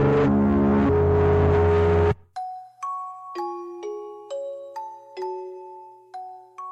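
No technical faults can be heard at any point in this music.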